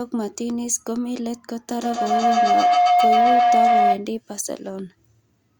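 Speech, with a feedback howl from 1.69 s to 4.13 s: a tone near 700 Hz builds to about 9 dB above the voice, pulsing roughly every 150 ms. Two endpoints sharing a room let each pass through the mic-to-speaker loop grow louder until the loop breaks.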